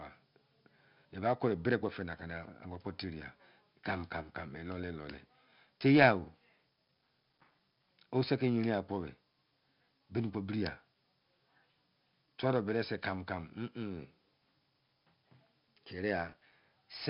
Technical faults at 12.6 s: 4-bit ADPCM compression

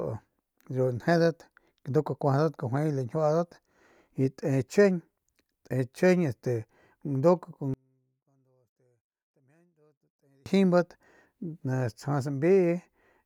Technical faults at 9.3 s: one channel inverted

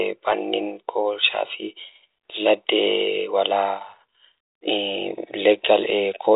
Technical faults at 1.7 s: none

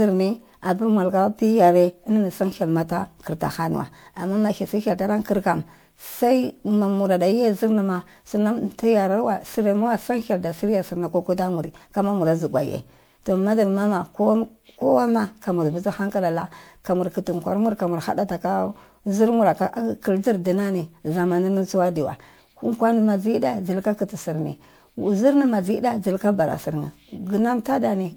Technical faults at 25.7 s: generation loss

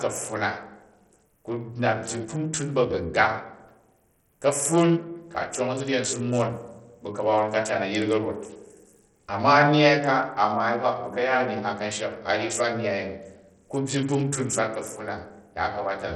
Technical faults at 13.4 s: Bluetooth SBC compression

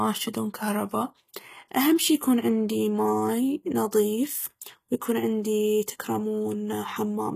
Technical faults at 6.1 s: HE-AAC compression

